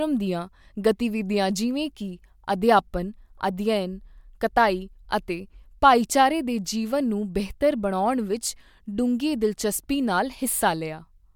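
Speech recording with nothing technically wrong with it to report.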